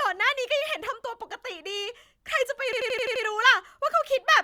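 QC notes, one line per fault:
2.73–3.24 s, system hang loop: the speech turns into a machine-gun stutter as one fragment of about 85 ms repeats exactly six times at 11.7 Hz. That fits a 4096-sample ring buffer being replayed while the system stalled, and essentially no audio seems to be lost around it. On the waveform the same block recurs identically. The spectrogram shows a row of matching columns with sharp vertical seams at each restart.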